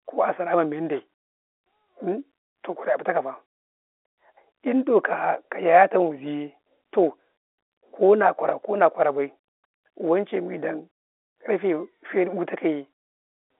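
Nothing goes wrong in this bit of telephone speech, which just sits in the usual narrow phone band of roughly 300 Hz to 3.5 kHz that G.711 telephone coding gives it.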